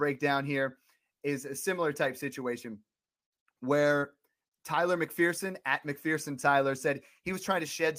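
No technical faults are audible at any point in the speech.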